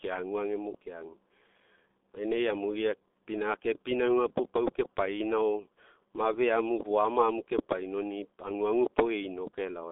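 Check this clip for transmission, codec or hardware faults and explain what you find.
One codec fault runs throughout: G.723.1 coding. Its 30 ms frames and slowly updated voice model, at a rate consistent with 6.3 kbit/s, leave the speech muffled and hoarse, confined to 250 Hz–3.6 kHz. Unlike plain band-limiting, consonants also smear.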